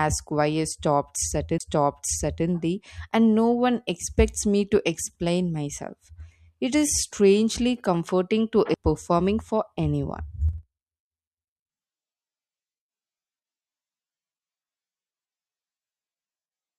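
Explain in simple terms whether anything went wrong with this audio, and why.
Twice the speech ticks and jumps abruptly, at 1.58 to 1.60 s and at 8.74 s. That's a CD skip: the laser slipped to another track of the disc's spiral, briefly muting and resuming elsewhere.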